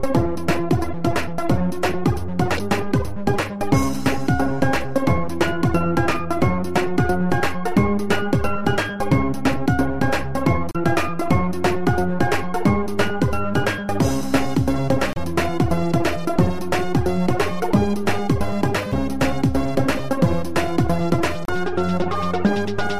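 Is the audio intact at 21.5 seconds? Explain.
No, not quite. From about 21.45 to 21.50 s there's damaged data in the compressed stream: some of the data there is wrong, so the decoder misreads those frames, loses sync and hunts for the next frame header. You hear it as a quick chirp or blip, about 44 ms long.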